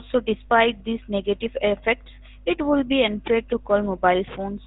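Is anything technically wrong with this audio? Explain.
Yes. Throughout the speech there is a buzzy, gravelly roughness, and the sound is muffled, with nothing above about 3.8 kHz. These are the marks of the GSM full-rate codec, and the plainly audible damage fits its 13 kbps rate. The codec reduces the voice to a vocal-tract filter driven by regularly spaced pulses, keeping only a third of the excitation samples. That coarse excitation causes the grainy buzz, and the band limit removes the air and sibilance.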